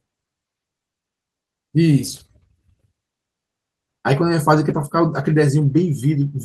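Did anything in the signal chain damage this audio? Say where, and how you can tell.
Yes, at the network stage: packets were lost, and the decoder filled each hole with the lower-bitrate backup copy carried in the following packet, a lost packet rebuilt from error correction. At 2.07–2.21 s and 4.69–4.83 s the speech turns briefly rough and noisy over about 80 ms each, which fits roughly four separate missing packets. At 5.61 s a single 20 ms frame has the same grainy texture. There is no silence at any of these points.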